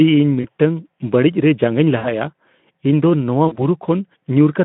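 Packets dropped three times on the narrowband Speex line, and the decoder filled each gap by extrapolating its last pitch and filter while lowering the gain. The losses were about 20 ms at 0.41 s, 60 ms at 1.97 s and 40 ms at 3.47 s. This VoIP packet loss concealed by the speech codec stretches the sound into a short buzzy tone or a coloured noise that fades. Because each decoded frame builds on the one before, the voice stays weak or distorted past each gap, until 0.47, 2.06 and 3.70 s.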